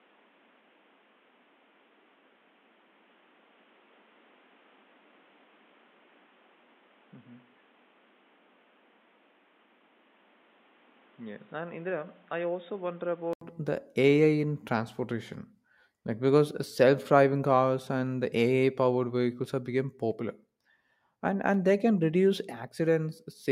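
A speech recording whose first 13.41 s sound dull and boxy, with nothing above 3.8 kHz, a level roughly 10 dB lower and a separate background noise about 30 dB under the voice. An 80 ms silence then precedes full-band, brighter sound. This is likely an input switched to a poorer device. A plain low-pass filter or codec bandwidth drop would not also shift level and noise character, or leave a gap at the changeover.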